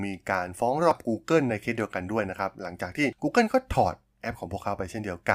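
A speech clip with a brief glitch at 0.91 s, caused by damaged data in a compressed stream that made the decoder misread frames and lose sync.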